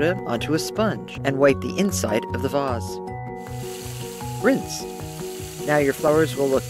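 Audio missing between chunks at 1.18 s: a short piece of sound, about 50 ms, drops out and the two sides butt together with no gap, heard as a sudden skip. The likely cause is a recorder working in 2.5 s chunks losing audio at a handover.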